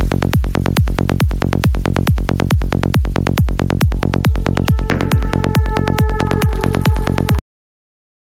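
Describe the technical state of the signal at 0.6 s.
Gain pumping is present at 0.6 s, as it is throughout the clip: the background swells up in the quiet gaps and then ducks by roughly 5 dB under each loud sound, squashing the dynamics. This likely comes from excessive input gain driving a fast limiter or compressor.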